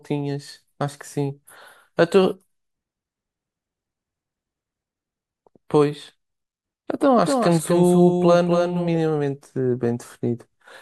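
From 7.18 to 8.88 s a second copy of the speech trails roughly 300 ms behind, about 5 dB quieter, starting and stopping abruptly: a doubled audio track, likely from a slower duplicate capture path.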